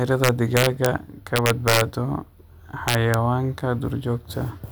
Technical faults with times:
0.24-0.86 integer overflow
1.36-1.81 integer overflow
2.88-3.14 integer overflow

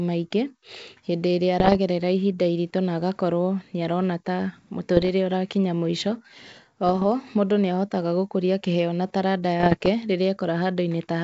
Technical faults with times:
1.59-1.77 bit errors on an ADPCM link
4.96-5.11 bit errors on an ADPCM link
6.87-7.03 bit errors on an ADPCM link
9.60-9.89 bit errors on an ADPCM link

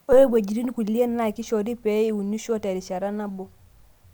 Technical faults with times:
none

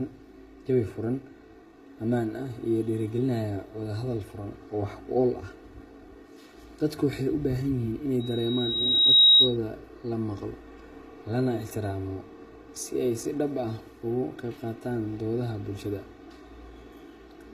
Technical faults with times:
0.00-17.54 channel delay (comb filtering)
0.00-17.54 HE-AAC compression
8.20-9.57 loudspeaker feedback squeal

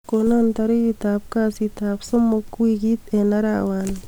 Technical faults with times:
none

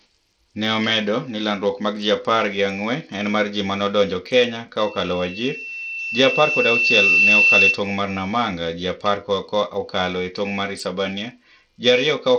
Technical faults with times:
0.00-12.39 Bluetooth SBC compression
4.78-7.81 loudspeaker feedback squeal

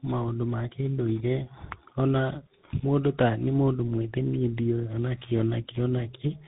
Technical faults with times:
0.00-6.47 tandem speech coding

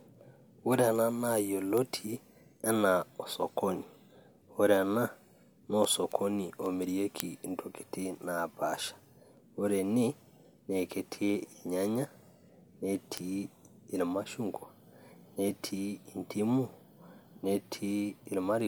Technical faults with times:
0.15-18.60 word clock ticks

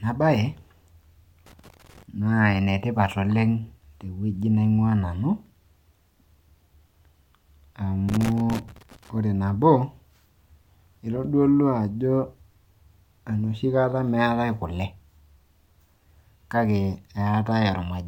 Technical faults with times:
1.46-2.03 loose connector crackle
8.09-9.09 loose connector crackle

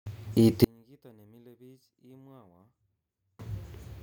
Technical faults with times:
0.64-3.39 one channel inverted

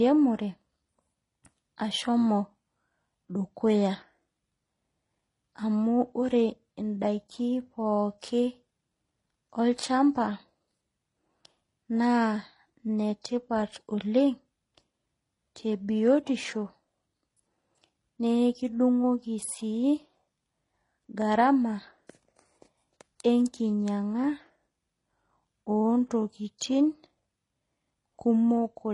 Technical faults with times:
0.00-28.93 transcoding between lossy codecs

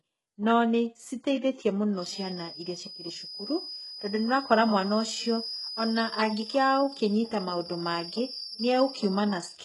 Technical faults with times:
0.00-9.64 HE-AAC compression
1.93-9.64 feedback whistle

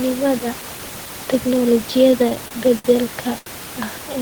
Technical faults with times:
2.11-2.86 repeated stalls (stutter)
3.38-3.48 short stall from a late packet

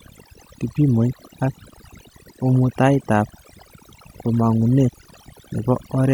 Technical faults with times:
0.00-6.14 overdone noise removal

